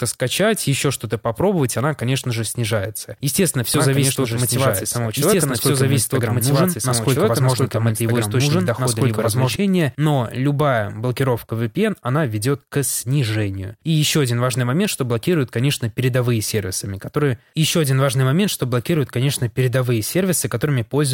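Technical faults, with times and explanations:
3.74–9.56 s, doubled audio track: a slower capture path likely mixed the speech in again, so an equally loud, dry copy trails about two seconds behind, starting abruptly before "но любая блокировка".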